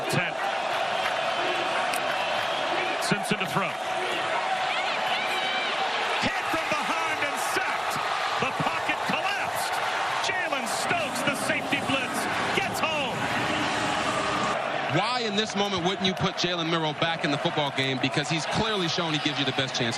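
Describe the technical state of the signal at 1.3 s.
At 1.3 s the signal is intact, with no dropout, clipping, distortion or other fault audible at that point.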